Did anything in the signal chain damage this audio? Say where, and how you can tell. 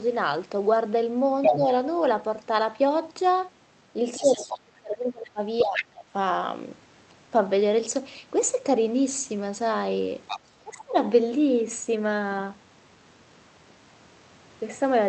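Yes. Other side's voice leaking through appears at 1.42 to 1.57 s, 4.15 to 4.59 s, 5.58 to 5.85 s and 10.27 to 10.40 s as a second voice under the talker. In the first burst it is about 5 dB louder than the talker's own speech, and later it is somewhat quieter. This is a call-processing fault, likely a loudspeaker echo that the echo canceller failed to fully subtract from the microphone signal before sending it on.

Speech suppressed in double talk shows up at 1.49 to 1.67 s, 4.2 to 5.4 s, 5.63 to 6.05 s and 10.64 to 10.95 s. In each of these spans the talker's level sags or cuts out. The dips range from slight to deep, and the 4.2 s stretch is the longest at about a second. This is also call processing. With both ends active together, the echo suppressor likely could not tell the near voice from the echo and attenuated everything.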